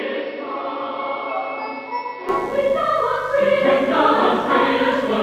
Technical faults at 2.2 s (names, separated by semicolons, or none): mains buzz; input switched to a poorer device